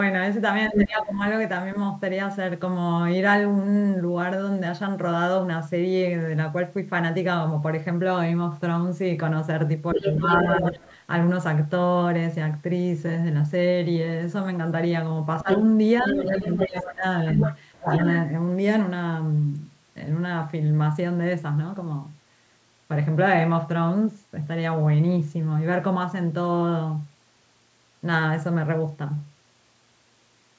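From 0.67 to 1.8 s a second voice cuts in at roughly the same loudness as the speech, and from 0.7 to 1.21 s the speech dips sharply under it, by about 15 dB at its deepest. The pattern recurs: a brief dip of about 10 dB across 9.94 to 10.85 s while a slightly quieter second voice runs 9.98 to 10.97 s, then a quick dip around 15.42 s, with the intruding voice present from 15.49 to 18.16 s and the speech pulled down by about 15 dB in patches between 16.12 and 17.91 s. The second voice is likely the other side's voice leaking through, where loudspeaker playback reached the microphone and the echo canceller failed to strip it out. The dips point to speech suppressed in double talk: with both sides active, the canceller turned the local speech down along with the echo.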